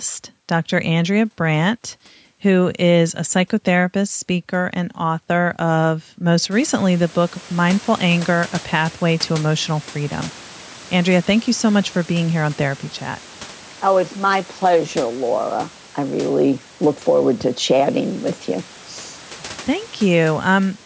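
Nothing stood out on listening to this speech recording; the room's background noise rises by about 24 dB after about 6.5 seconds and stays about 24 dB below the speech from there on.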